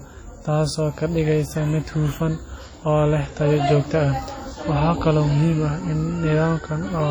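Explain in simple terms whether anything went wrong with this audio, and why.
Something did go wrong, and it runs through the whole recording. The speech sounds smeared and ringing, with a hiss that swells and fades along with the talking. That pattern points to heavy WMA compression as the likely cause. The encoder squeezed the audio hard, so its errors spread out in time around each sound, and quiet detail was simply thrown away, leaving a washy quality.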